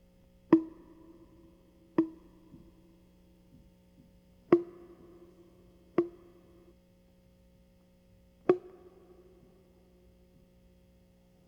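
From 1.96 s to 6.72 s the music has a doubled audio track: a full-band copy, about 5 dB quieter, trails roughly one and a half seconds behind, likely from a slower second capture path. A spectrogram shows every pattern repeated, time-shifted, with abrupt edges.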